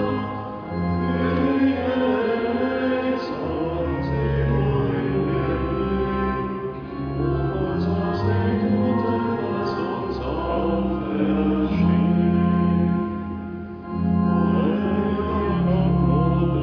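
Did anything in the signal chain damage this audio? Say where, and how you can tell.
No, nothing in the chain from capture through to playback has left an audible mark on this audio.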